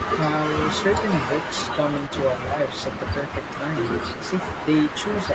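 Echo leak runs at 0.0 to 0.1 s, 0.59 to 2.16 s, 2.65 to 3.55 s and 3.72 s to the end: a copy of the speech trails it by 151 ms, about 10 dB down at first and then about 15 dB down, likely where a loudspeaker's echo canceller let its own output back into the microphone.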